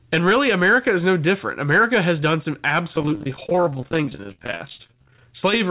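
From 2.96 to 5.21 s the speech turns choppy, breaking up as short pieces drop out one after another. This is repeated packet loss (robotic sound). Audio kept going missing across the stretch, in many short holes, the longest about 36 ms. Each hole was covered by stretching out the sound just before it, so roughly 44 percent of this span, nearly a second, is patched-in sound rather than real speech.

From 5.24 to 5.70 s the speech sounds slightly rushed while its pitch stays the same, running at about 107 percent of normal speed. This is a jitter buffer speed-up. The receiver had more audio waiting than it wanted, and it trimmed tiny pitch-period-length slices many times in quick succession to catch up, dropping a few tens of milliseconds in total. The whole clip is bandlimited with nothing above 4 kHz, which fits a G.711-style narrowband call codec.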